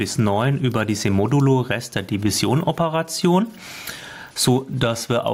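Gain pumping throughout: input gain, likely set too high, is clamped by a fast limiter on loud sounds, so the gain swings by around 10 dB.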